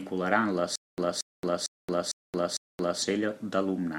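From 0.76 s to 3.02 s the audio stutters with silent gaps: a 0.23 s burst of speech plays, then about 0.22 s of dead digital silence follows, and the same burst returns, five times over at an even 0.45 s rhythm. This is likely a stalled player or stream that replays its last buffered fragment at each retry and then runs dry, so the speech that belonged in that span never arrives.

At 3.30 to 3.32 s a brief glitch occurs, reaching only around -30 dBFS. This is a corrupt frame decoded: a single compressed frame with damaged bits was played rather than discarded, so misread values put energy at the wrong frequencies for about one frame's length. The result is a short artefact.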